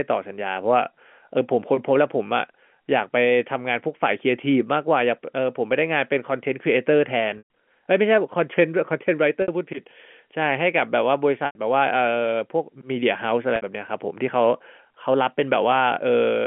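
At 7.38 s, 9.42 s, 11.46 s and 13.56 s the speech briefly sticks on a held, buzzy tone: packet loss with pitch repetition. The receiver replays the last pitch period across each hole of 120, 60, 90 and 60 ms, which fits lost packets of about 30 ms each. Unlike a plain dropout, the repeated period fades out over about 50 ms, so the longer holes fall silent before the speech returns with a short cross-fade. Unlike a stutter, no syllable is heard again. Just a brief buzz fading out beneath the G.711 narrowband line.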